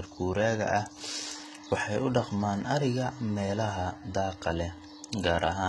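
From start to end, the speech carries heavy codec damage, most likely from HE-AAC compression. Nothing reaches above 11.8 kHz. The treble is present but synthetic. It is copied up from lower bands and shaped only roughly, so its harmonics fail to line up with those below. S sounds come out gritty, metallic or lispy. The degree of damage points to a very low bitrate, around 16 kbps.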